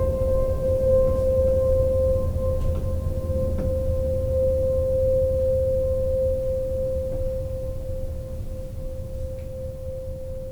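Nothing in the music stood out as a technical problem on listening.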